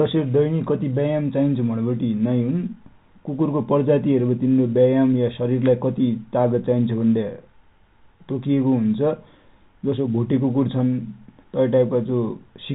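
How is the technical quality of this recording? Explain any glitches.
No glitches can be heard anywhere in this recording.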